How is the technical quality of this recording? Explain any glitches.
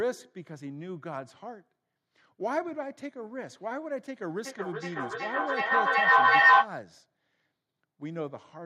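The recording has one clear glitch, a stretch of feedback echo between two devices from 4.45 to 6.74 s. The speech is repeated at a steady interval of roughly 0.4 s. Two devices in the same room are on one call, and one plays back what the other's microphone sent. That microphone captures the playback again, and neither echo canceller removes sound played by the other device. Each pass returns thinner and more ringing, building to about 15 dB louder than the speech. On a waveform this appears as evenly spaced copies that swell instead of fading. On a spectrogram it shows as repeated, progressively narrower bands at regular intervals.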